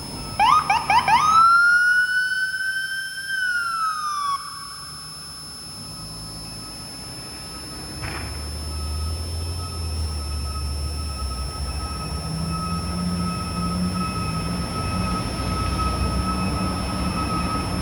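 A switching power supply in the chain is running in an audible burst mode or beating with another one, and its switching noise leaks into the audio from start to finish as a switching supply whistle: a high tone around 5 kHz, wandering between about 5.18 and 5.41 kHz, sitting roughly 15 dB below the sound.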